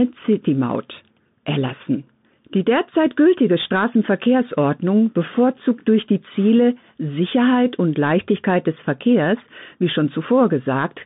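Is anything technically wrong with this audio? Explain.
Yes. The speech carries Bluetooth CVSD headset codec damage from start to finish. The band runs only from about 150 Hz to 3.7 kHz, which fits a 64 kbps CVSD headset link. CVSD sends one bit per sample saying up or down, with an adapting step size, so loud, fast-rising high content outruns the step and distorts. The damage is plainly audible: s sounds turn scratchy, and a granular hiss sits beneath the speech throughout.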